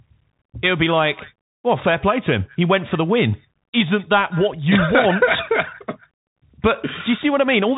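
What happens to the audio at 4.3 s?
At 4.3 s the speech carries Bluetooth CVSD headset codec damage, present across the whole clip. The one-bit delta coder, which fits a 64 kbps CVSD stream, strips everything above 3.8 kHz, roughens sibilants and leaves granular hiss. A spectrogram shows a flat ceiling at 3.8 kHz over a grainy noise floor.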